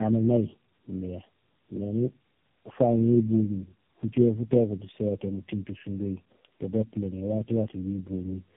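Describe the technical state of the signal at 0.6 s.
Tandem speech coding runs through the whole clip, including 0.6 s. The speech sounds re-coded about three times in a row, turning rough, warbly and muffled, with nothing above 3.8 kHz.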